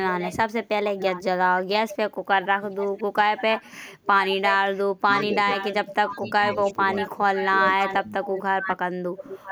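A speech recording with two problems. The first is an echo leak. From 0.07 to 1.24 s, and again from 1.87 s to the end, a copy of the speech returns 995 ms late. It sits about 15 dB below the direct speech at first, then rises to about 10 dB below. The likely cause is a far end on a loudspeaker whose echo canceller let part of the microphone pickup through and sent it back. The second is speech suppressed in double talk. From 5.04 to 5.49 s, the talker's level dips by about 20 dB, over roughly a fifth of a second in all. From 6.05 to 9.34 s, it drops by up to about 30 dB in pieces, covering around 2 s in total. Both sides were talking at once. The echo canceller likely could not tell the near talker from the returning echo, so it pulled both down together.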